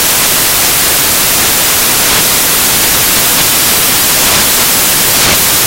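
Throughout the clip, samples built from the wrong bytes, misaligned, swapped or offset, turn rapidly changing low-order bits into the dominant values, burying the sound under broadband noise.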